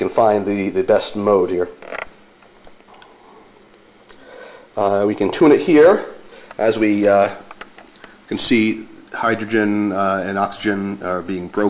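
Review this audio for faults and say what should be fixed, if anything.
Nothing stood out on listening, so there's nothing here that needs fixing.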